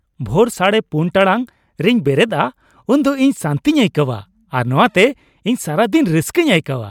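No dropouts, clipping, glitches or other playback faults can be heard anywhere in the speech.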